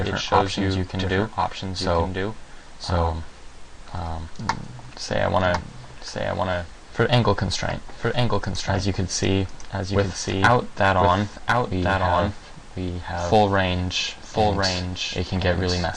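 Throughout the clip a doubled audio track is heard: a second full-band copy trails the original by about one second, roughly 5 dB quieter. Unlike an echo or reverb, it neither decays nor adds room colour; it is likely a second, slower capture path mixed in.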